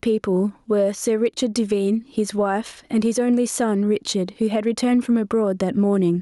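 Throughout the speech, gain pumping: the gain swings by roughly 10 dB, ducking under loud syllables, likely from a fast limiter on overdriven gain, unlike a gate's abrupt silence.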